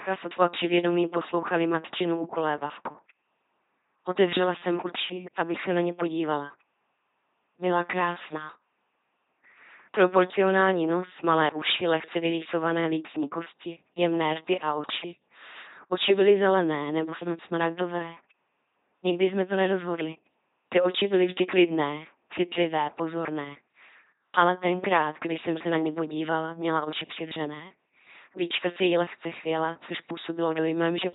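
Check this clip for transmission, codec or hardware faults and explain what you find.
The clip has one fault, present from start to finish: LPC-10 vocoder coding. The speech is heavily damaged by it. The vocoder throws away the real voice. It keeps only a ten-pole vocal tract filter and excites it with either a pulse train or noise. Each moment is forced to be fully voiced or fully unvoiced. The result is a buzzing, mechanical robot voice. Nothing is heard above 3.8 kHz. This fits a 2.4 kbit/s LPC-10 stream.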